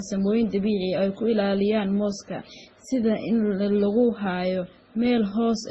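From start to finish the speech sounds dull above 11.5 kHz, with the different artefacts of several codecs heard together. Those textures don't come from one codec. They point to transcoding between lossy codecs, likely a very low-rate MP3 (around 16 kbit/s) passed through WMA and then Opus. Each later stage spent its bits re-coding the earlier damage, so you hear all the sets of artefacts stacked together.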